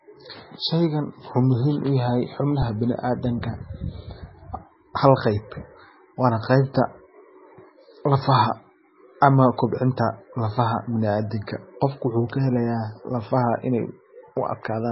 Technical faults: MP3 compression

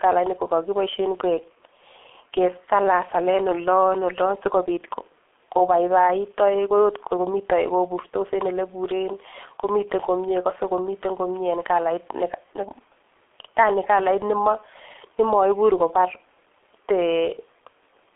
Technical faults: G.723.1 codec

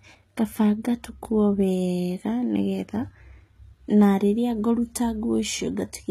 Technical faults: HE-AAC compression

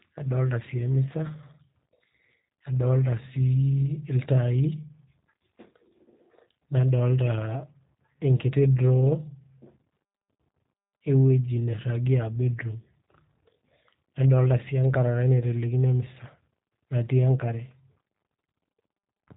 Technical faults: G.729 codec

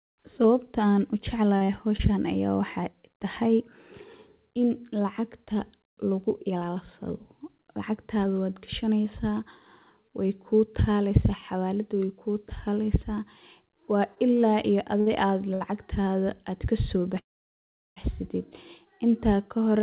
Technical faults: repeated packet loss (robotic sound); short concealed packet loss; short stall from a late packet; call audio freeze; jitter buffer speed-up

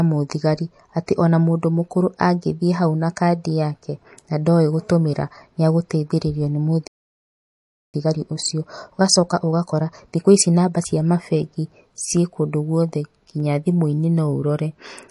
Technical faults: MP3 compression; playback stall; time-compressed catch-up; dropped samples

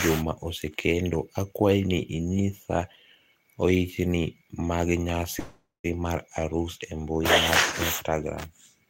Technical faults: call audio freeze

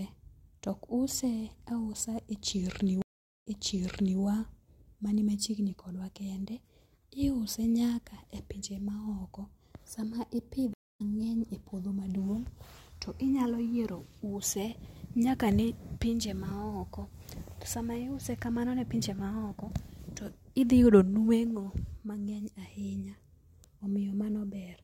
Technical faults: stream reconnect

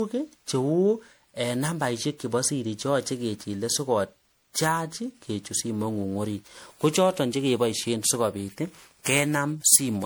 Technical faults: generation loss

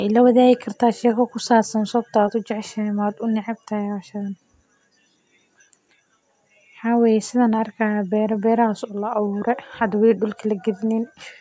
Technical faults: none

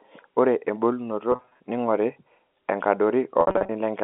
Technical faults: packet loss with pitch repetition

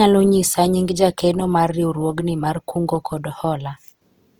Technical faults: Opus compression

